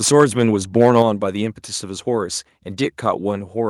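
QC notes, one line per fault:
0.07–0.43 s and 0.80–1.02 s, microphone overload: the loudest syllables take on a harsh, crackling edge as their peaks flatten, about 5 dB past full scale in the first stretch and about 3 dB in the second, with more of the waveform squared off there; likely input gain set too high for the converter.
1.02 s, microphone volume stepped down: as the second distorted stretch ends, voice and background drop together by about 4 dB in one abrupt step rather than a fade, likely the call software cutting the device's input volume in response to the clipping.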